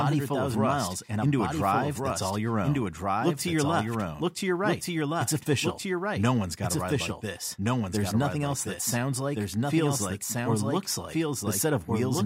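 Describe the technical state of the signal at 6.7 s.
At 6.7 s, as throughout, there is a doubled audio track: a second full-band copy, about as loud, trails by roughly 1.5 s, likely from a slower capture path. A spectrogram shows every pattern repeated one and a half seconds later.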